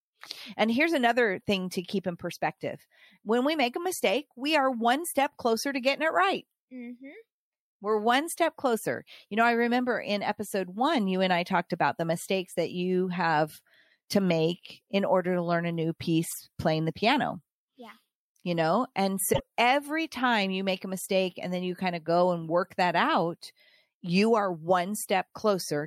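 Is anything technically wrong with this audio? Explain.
Yes. At 16.29 to 16.36 s, right after "to learn a new" and before "playing the piano", and again at 19.32 to 19.40 s, between "know and" and "every time you make", the speech skips forward and the join comes out as a brief chirp, noise burst or short hole. The likely cause is a broken MP3 bit reservoir: frames of roughly 26 ms went missing, and the next frames reached back for borrowed data that was no longer there, decoding garbage until the stream resynchronised.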